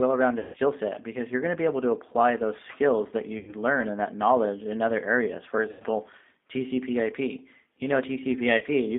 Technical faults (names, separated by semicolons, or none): G.729 codec; VoIP packet loss concealed by the speech codec